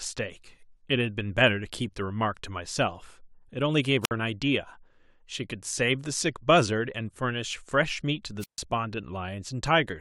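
At 4.03 to 4.11 s the speech is briefly overtaken by a rise of hiss, then drops into near silence for about 57 ms before returning. At 8.39 to 8.61 s the same thing happens with a longer hole of about 143 ms. Both are wireless microphone squelch dropouts: the analogue FM radio link weakened until the receiver's squelch shut off the output, muting the sound until the signal recovered.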